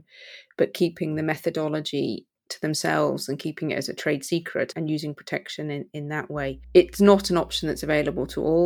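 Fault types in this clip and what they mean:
Mains hum: a steady low tone at 60 Hz enters at 6.35 s and continues to the end of the clip, sitting roughly 20 dB below the speech. It is the power line leaking into the signal path, typically through a ground loop between connected equipment or magnetic pickup from a nearby transformer.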